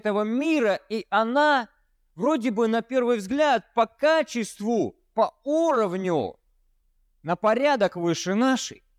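A speech recording with no audible technical faults.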